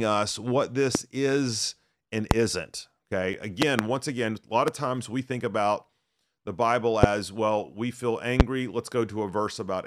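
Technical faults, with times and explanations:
0.95–0.98, 2.31–2.34, 3.62–3.82, 4.68–4.71, 7.03–7.06 and 8.40–8.43 s: loud pop. Short, sharp pops stand roughly 20 to 25 dB above the speech, which continues underneath. The third is a double pop just before "once again a lot". The likely cause is a sudden voltage pulse from a plug, switch or static discharge.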